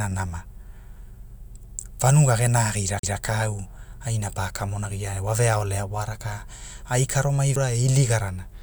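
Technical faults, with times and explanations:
2.99 to 3.03 s and 7.56 s: CD skip. The speech breaks off with a tick or short gap and resumes from a different point. A knock or a disc flaw threw the laser onto another turn of the spiral. The player muted briefly while it relocked, about 40 ms at the first skip and only a few milliseconds at the second. The tick is the abrupt cut at the mute, and the jump comes from reading a different turn.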